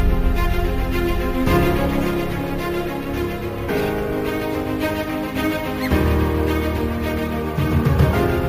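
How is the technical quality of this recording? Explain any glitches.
The recording has one fault, present throughout: imaging from sample-and-hold upsampling. The audio was raised from 16 kHz to 44.1 kHz by repeating samples without a smoothing filter, leaving mirror images at 8 to 16 kHz, about 24 dB below the signal. They are heard as a metallic fizz that tracks the sound's level.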